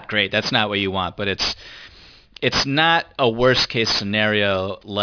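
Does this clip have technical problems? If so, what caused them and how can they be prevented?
Yes, aliasing runs through this whole speech clip. Content above 5.5 kHz has folded back down, making sibilants gritty and metallic at only about 10 dB under the speech, which fits an unfiltered drop from 44.1 kHz to 11 kHz. Low-pass below the new half-rate before resampling.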